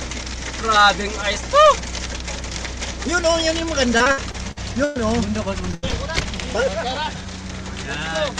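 Between 3.97 and 4.97 s there is repeated packet loss with a robotic sound. Six separate gaps fall within that second, about 280 ms of audio in all, the longest 111 ms. Each gap is filled by extending the preceding sound, so roughly 28% of the stretch is synthetic continuation. The result is a choppy, mechanical texture. What separates this from a single burst is the rhythm: loss keeps recurring across a whole second instead of forming one hole.

At 5.71 to 5.75 s comes a short concealed packet loss. About 20 ms failed to arrive in time. The receiver bridged it by carrying on the last sound briefly and blending back, which leaves a small smear or wobble. It is far too brief to register as a dropout, and that is the mark of this kind over a burst.

Immediately after, from 5.75 to 5.85 s, a burst of packet loss removes about 80 ms. The concealment holds the last sound and lets it fade, so a held buzz or decaying hiss replaces the missing audio. 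The sound then resumes further along with that section absent. This is one continuous hole, long enough to hear as a gap, not the scattered chopping seen earlier.

A second short concealed packet loss follows at 5.91 to 5.94 s, again about 20 ms bridged by a brief continuation. It is heard as another small wobble rather than a dropout.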